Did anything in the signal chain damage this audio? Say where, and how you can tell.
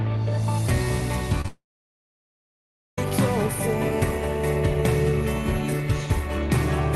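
Yes, the damage is at the network stage of the call path. The first sign is short concealed packet loss at 1.41 to 1.45 s and again at 1.46 to 1.48 s: two brief smears where roughly 20 ms and then 10 ms of audio failed to reach the decoder in time. The receiver bridged each gap by extending the preceding sound and cross-fading back into the real signal, which leaves a brief smear or wobble rather than a clean hole.

Immediately afterwards, from 1.48 to 2.98 s, comes a long network dropout. Nothing arrives for about 1.5 s. The concealment continues the last sound as a fading buzz or hiss for roughly a tenth of a second, and then there is about 1.4 s of silence before audio resumes mid-stream with the missing stretch gone. The likely cause is a burst outage on the connection, not a fault in the codec itself, whose band limit sits near 12 kHz.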